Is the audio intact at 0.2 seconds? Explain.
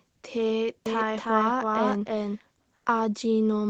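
Yes, the audio is intact at 0.2 seconds, with nothing there beyond the ordinary character of the call path it travelled through.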